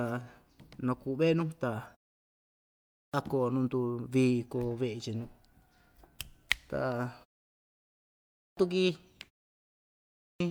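Clipped start after a pause at 2.48, 7.95 and 9.75 s: in each case the speech resumes abruptly out of silence after a pause of about 0.5 to 0.8 s, with the first 0.62 to 0.66 s swallowed, so the phrase beginning "koo nuu" arrives already under way. The output device appears to sleep during the gap and needs that time to wake and lock again, discarding the opening sound of each phrase.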